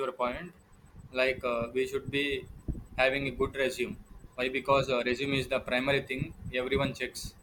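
Speech recording, no technical faults heard anywhere in the clip.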